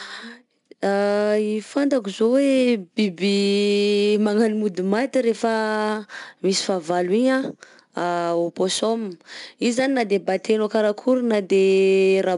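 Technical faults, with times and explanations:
Throughout, 4-bit ADPCM compression: each sample is coded as a coarse 4-bit step from a prediction, so a plainly audible gritty hiss rides on louder speech and sharp onsets distort. A spectrogram shows level-tracking broadband noise and nothing above 10.6 kHz, which fits about 89 kbps.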